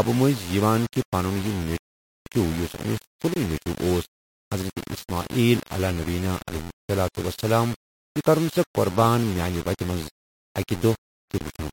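Low bit depth without dither runs through the whole clip: the speech carries a coarse, grainy distortion that rides on the signal, roughest on quiet syllables and tails, where the sound sputters or collapses to nothing between steps. The error sits only about 15 dB below the speech. This is likely rounding to very few levels with no dither, consistent with roughly 5-bit quantisation, so the error tracks the waveform instead of forming a steady hiss.

A rebuffering stall follows from 1.78 to 2.26 s. Playback halts into silence for about 0.49 s, then picks up exactly where it stopped. The player ran dry of downloaded audio and waited for more to arrive, so nothing is missing from the speech, but the pause adds time. The break leaves a dead hole followed by a clean resumption.

Gaps between chunks come next, at 3.34 to 3.36 s, 7.36 to 7.39 s, and 11.39 to 11.41 s. Each is a dropout of 23 ms, spaced about 4 s apart, which points to the audio being delivered in 4-second chunks with silence inserted at each join, from padding or a late start on each chunk. 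No material is lost, but each seam produces a brief, clipped hole.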